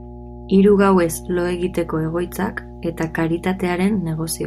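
Mains hum runs throughout this speech clip, a steady low tone sitting under the talker from the first moment to the last. It is pitched at 60 Hz, the frequency of the power line, with a few low harmonics above it. Power-line current has leaked into the signal path, through a ground loop or the field of a nearby transformer. The hum is fairly prominent, only about 15 dB below the speech, so it stays audible even while the talker is speaking.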